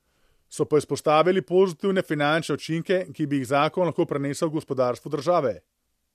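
No technical faults can be heard in the speech.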